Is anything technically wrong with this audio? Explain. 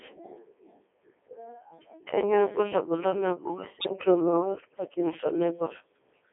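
Yes, two faults. Throughout, the speech has passed through the Codec 2 vocoder at 3.2 kbit/s, confined to a 300 Hz to 3.4 kHz line band. It sends only pitch, voicing, level and a spectral envelope, and rebuilds the voice from sine waves, so the voice comes out heavily robotic and buzzy.

From 3.80 to 3.93 s, bit errors on digital voice radio hit the vocoder stream at a rate of several percent. Corrupted bits set wrong pitch, level, voicing and spectrum for a handful of frames in a row, so the voice jumps in pitch and tone and breaks into warbling, bleeping gibberish.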